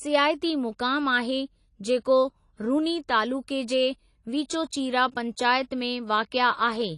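Likely AAC compression at a low bitrate removes everything above 11.4 kHz throughout, leaving the speech dull and smeared, with a fizzy, warbling edge on sibilants.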